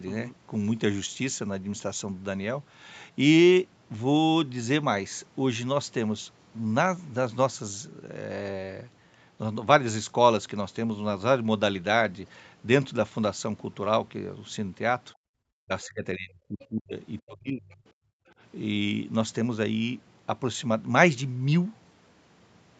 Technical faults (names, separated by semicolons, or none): background gated by the echo canceller; speech suppressed in double talk; other side's voice leaking through